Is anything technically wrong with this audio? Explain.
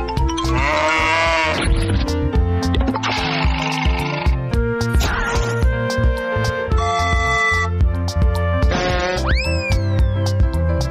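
No, nothing technically wrong can be heard in this audio.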